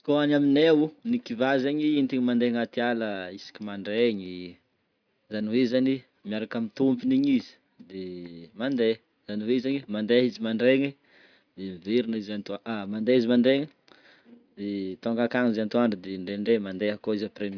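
Nothing in this recording trips up the ear; it's just someone talking, with no faults to point to anywhere along the way.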